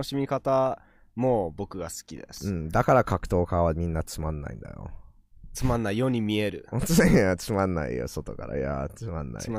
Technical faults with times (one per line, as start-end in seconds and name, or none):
2.37-2.41 loose connector crackle